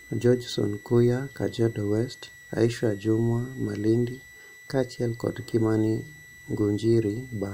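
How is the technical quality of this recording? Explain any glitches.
The recording is marred by a constant high whistle under the speech. Switching supply whistle, throughout the clip: a switching power supply is running in an audible burst mode or beating with another one. It puts a thin tone wandering between roughly 1.93 and 1.99 kHz, well below the speech level.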